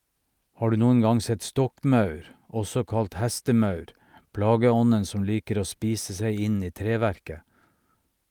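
A speech recording, with no technical fault audible at any point. There is nothing to time or trace back to a cause.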